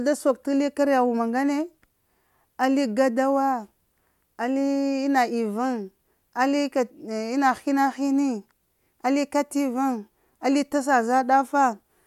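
No technical faults can be heard anywhere in the recording.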